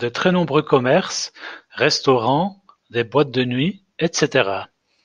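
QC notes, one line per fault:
No audible faults found on review of this speech clip.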